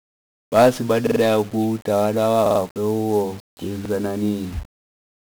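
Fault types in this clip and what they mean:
1-bit DFPWM compression: The speech is coded at one bit per sample, nudging an adaptive level up or down. Damage is heavy throughout. The speech sounds fuzzy and crackly, with treble buried in hiss. The coarseness fits a rate near 48 kbps.
Repeated buffer: From 1.07 to 1.21 s, playback ran short of fresh audio and replayed its last chunk. A piece about 46 ms long sounds three extra times, with hard joins. It is heard as a brief stutter. The length fits a 2048-sample buffer.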